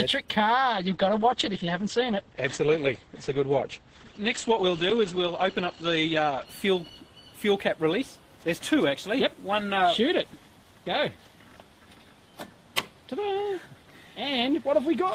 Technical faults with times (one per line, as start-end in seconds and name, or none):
0.73-6.53 call bitrate drop